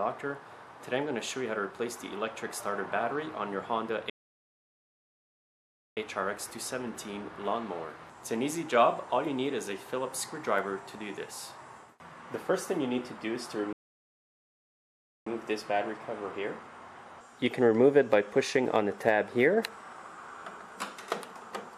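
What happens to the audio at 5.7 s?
At 5.7 s the audio is still inside a playback stall that runs from 4.10 to 5.97 s, about 1.87 s of silence. The sound halts mid-flow, likely because the player starved of data or its thread blocked. The waveform flatlines and the spectrogram shows a blank gap before sound resumes.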